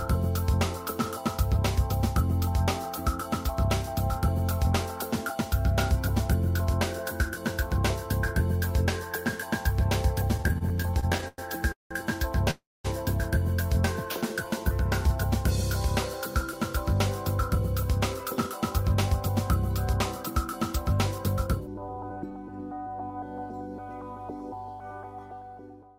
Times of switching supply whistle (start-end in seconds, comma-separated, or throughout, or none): none